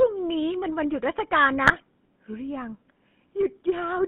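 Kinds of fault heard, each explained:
GSM full-rate codec: The speech runs through an early mobile-phone vocoder that models the vocal tract as a filter and drives it with a coarse, pulse-based excitation that keeps only part of the fine detail. The result is a plainly audible buzzy, gravelly roughness across the whole clip, with the band held to roughly 150 Hz to 3.5 kHz. This character fits the 13 kbps GSM full-rate coder.
GSM bit errors: From 1.64 to 1.82 s, corrupted bits reach the decoder, so damaged filter, pitch and gain parameters distort the spectrum and level of each affected frame. The speech breaks into a short burst of squawking, gargling distortion with abrupt jumps in level, then recovers. The length of the burst points to roughly nine consecutive 20 ms frames hit, and its density suggests a bit error rate of around 2%.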